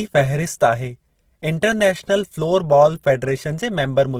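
Opus compression runs through the whole clip, and the damage is plainly audible. The speech carries a rough, grainy texture, with tonal parts of the sound turning noisy rather than clean. This is likely Opus in its music (CELT) mode working at a low rate, which fits about 16 kbps. Band energies are held, but with bits scarce, detail is refilled by folding lower bands or with noise. The bandwidth stays full, with nothing above 20.2 kHz.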